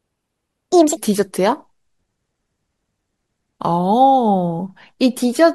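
From the start to 0.97 s the speech sounds hurried and high, about seven semitones up, then drops to its natural pace and pitch. This section at the wrong speed plays 1.55 times too fast, likely because playback ran against the wrong clock.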